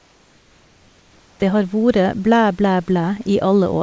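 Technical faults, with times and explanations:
0.00–1.42 s, comfort noise in place of the background: before "har vore blæ blæ", a steady, featureless hiss about 2 dB quieter, likely synthesized while transmission paused, not a gate's silence.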